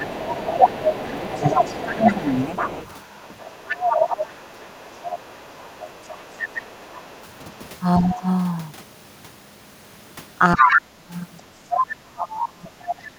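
From 0.0 to 2.31 s the speech is suppressed in double talk. The level dips by about 15 dB, for roughly a second and a half. The likely cause is an echo canceller turning down both voices while both sides talked. Over the same start, running to 7.57 s, the other side's voice leaks through. It sits about 10 dB under the speech. The likely cause is loudspeaker echo the canceller failed to remove. From 3.3 to 8.27 s the speech is suppressed again, likely by the same double-talk clamping. It drops about 15 dB, about a second in all. From 10.55 s to the end the dips are deeper, about 25 dB, for roughly two seconds. This is likely the canceller again. From 10.58 to 11.91 s the leaked voice returns, likely from uncancelled echo. Now it is about 5 dB louder than the speech.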